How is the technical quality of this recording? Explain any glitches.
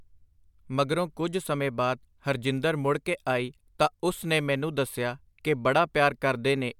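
No glitches can be heard, and the speech signal is technically intact with no faults to report.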